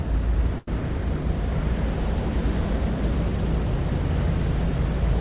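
From 0.58 to 0.68 s, a burst of packet loss removes 90 ms. The receiver extends the last sound and fades it, giving a brief dying tail before the audio skips ahead. A spectrogram shows a smeared, decaying patch below the call path's 4 kHz ceiling.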